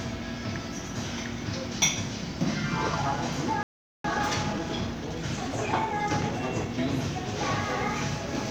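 At 3.63 s a playback stall hits, most likely because the player ran short of buffered data or its output thread was held up. The audio cuts out abruptly and stays silent for about 0.41 s, until 4.04 s, before sound resumes.

From 4.04 s to 6.78 s the player performs a time-compressed catch-up, trimming its backlog by removing short slices and cross-fading the joins. The sound runs about 1.15 times faster at unchanged pitch, hurried.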